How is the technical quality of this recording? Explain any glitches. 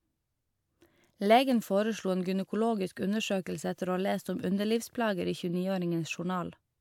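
No glitches can be heard anywhere in the recording, and nothing in the signal chain calls for comment.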